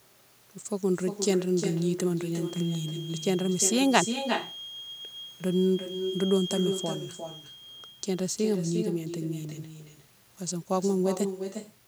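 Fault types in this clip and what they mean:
Echo with no canceller: every phrase is shadowed roughly 0.4 s later by a quieter copy, about 7 dB down, thinner than the original, running the whole way through the speech. The far end is playing the call over a loudspeaker, its microphone is catching that playback, and nothing on that side subtracts it, so the talker's own speech returns after the round trip through the network.
Feedback whistle: a thin, steady tone at 3.2 kHz sits behind the speech from 2.38 s to 8.01 s, well below the speech at roughly 15 dB down, swelling and fading slowly in level but never building up. The likely cause is a loudspeaker-to-microphone loop held right at the edge of feedback, so a single high frequency keeps ringing without running away.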